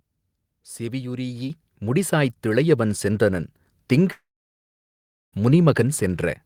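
At 1.5 s the microphone volume is stepped up: the call software judged the input too quiet and raised the device gain in a single move of about 7 dB. Speech and background noise jump louder together, mid-stream, with no fade.

From 4.11 s to 5.34 s a gap opens, likely a long network dropout. The last sound continues briefly as a fading buzz or hiss, then about 1.1 s of silence follows. Roughly 1.2 s of speech never plays, and the audio resumes beyond it.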